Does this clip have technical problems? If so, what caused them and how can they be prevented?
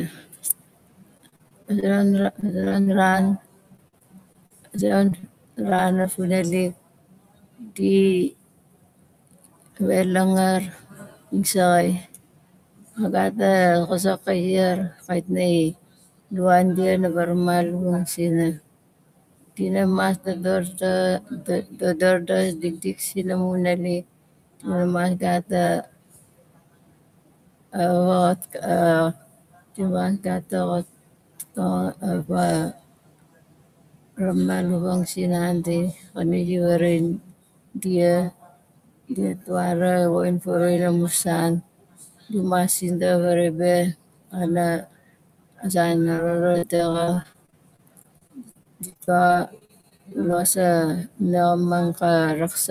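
Yes. Three kinds of fault can be heard.

Speech cut by the noise suppressor runs from 0.09 to 16.33 s and again from 18.17 s to the end. The suppressor mistakes quieter parts of the speech for background and pulls them down by as much as about 19 dB, roughly seven seconds' worth in the first stretch, so endings and soft consonants sound swallowed. The room noise sits about 27 dB below the speech and is part of the recording, not a fault. Unlike packet loss, nothing is replaced or smeared here. The sound simply dips in level along with the background. Prevention: use a gentler suppression setting, or let the clean room level keep it from engaging aggressively.

Repeated packet loss (robotic sound) occurs from 1.17 to 1.84 s, 2.22 to 3.15 s, 3.77 to 5.30 s and 46.16 to 50.34 s. Short holes, the longest about 56 ms, arrive one after another and are each patched by extending the previous sound. 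Roughly a sixth to a fifth of each stretch is filled in this way, which gives a choppy, robotic texture. Its density sets it apart from the isolated drops near 6 s. Prevention: use a steadier network path or a larger jitter buffer.

Short concealed packet loss appears at 5.70 to 5.75 s, 5.76 to 5.80 s and 6.02 to 6.06 s. Each loses about 20 ms, which the decoder bridges by continuing the last sound before blending back in, heard as a brief smear or wobble. These are single, separate events rather than a sustained robotic stretch. Prevention: the same network and jitter-buffer measures, with forward error correction to recover isolated lost packets.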